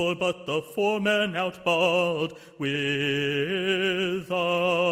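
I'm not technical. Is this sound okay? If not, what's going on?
Yes, nothing in this sound stood out as a problem when I listened to it.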